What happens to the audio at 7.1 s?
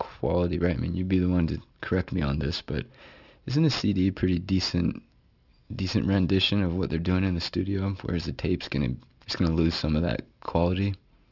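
At 7.1 s the speech carries aliasing, present across the whole clip. Content above 6 kHz was not filtered out before the rate reduction, consistent with a 12 kHz target, so it folds back below 6 kHz roughly 20 dB under the signal, making sibilants gritty and metallic.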